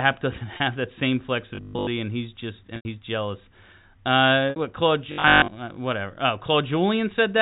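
Packet loss with pitch repetition at 0.57–0.60 s: about 30 ms of audio went missing, and the receiver stretched the last pitch period across the gap, giving a brief, slightly held buzz. Robotic sound from repeated short buffers at 1.55–1.87 s: the voice becomes a rigid 50 Hz metallic buzz, likely because new audio arrived too seldom and a 20 ms stretch kept being replayed while most of the real sound was skipped. Packet loss with pitch repetition returns at 2.76–2.85 s. This 90 ms gap is long enough for the repeated period to fade toward silence before the speech cross-fades back in. It returns again at 4.50–4.56 s with a 60 ms gap. The robotic buzz recurs at 5.12–5.48 s, at the same 50 Hz pitch from the same buffer repetition. Throughout, the G.711 telephone coding limits the sound to below 4 kHz.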